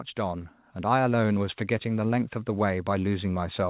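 From 0.15 s to 1.26 s there's a case of automatic gain rising: the gain control decided the input was too quiet and eased its gain up, by about 4 dB over roughly a second. The speech and the background noise swell together, so the whole picture gets louder rather than just the talker. All of it sits in the narrow band of a telephone-style call path with nothing above 4 kHz, which sounds like G.711 mu-law.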